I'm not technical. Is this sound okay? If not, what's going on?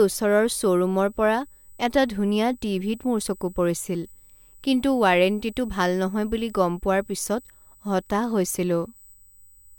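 No, not quite. There's a faint, steady high-pitched whine running the whole way through the speech, a USB whine. Current pulses on the USB connection leak into the audio, leaving a fixed tone at 8 kHz, loudest up at 16 kHz, sitting quietly under the speech.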